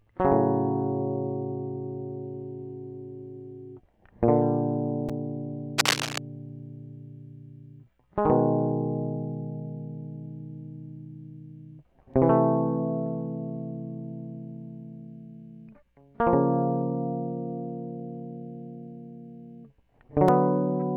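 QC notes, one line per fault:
5.78–6.19 s, cable scratch noise: for about 0.4 s a dense, uneven burst of scratching and rustling sits on top of the music, roughly as loud as the music itself. The likely cause is a worn cable, connector or control being moved. Its contact resistance jumps about rapidly while it shifts, and each jump adds an irregular spike of noise to the signal path.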